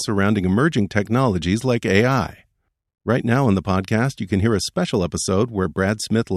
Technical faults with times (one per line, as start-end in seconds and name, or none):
none